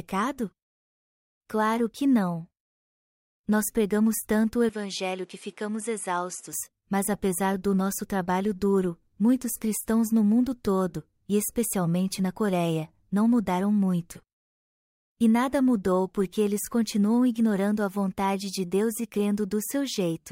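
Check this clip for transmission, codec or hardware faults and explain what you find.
One hardware fault appears. From 4.69 to 6.53 s the input likely switched to a poorer device: its narrower band cuts everything above 11.4 kHz, so the speech turns duller, drops about 5 dB, and gains a faint new noise floor, with no silence at the changeover.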